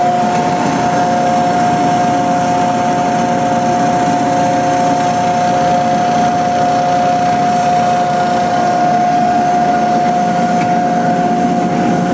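Throughout the clip, the level rises and falls in a gain pumping with a swing of roughly 5 dB. Loud and quiet passages sit unnaturally close in level, leaving the sound flattened and squashed, with the call path's top end stopping at about 8 kHz. The likely cause is input gain set far too high for the microphone, with a fast limiter or compressor clamping down on each peak and releasing in the pauses.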